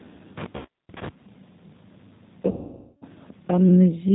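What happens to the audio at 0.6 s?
At 0.57 to 0.68 s there is VoIP packet loss concealed by the speech codec. The decoder, missing roughly 80 ms of packets, keeps repeating its last pitch and vocal tract filter at falling gain. The speech smears into a fading buzzy tone or coloured noise, and because each frame builds on the previous one, the sound stays weak for a short stretch after packets resume.

Underneath, the G.729 codec, at what sounds like 8 kbit/s, rebuilds the speech from a filter, pitch predictor and sparse pulses. It cuts everything above 4 kHz and leaves a plainly audible rough, synthetic texture.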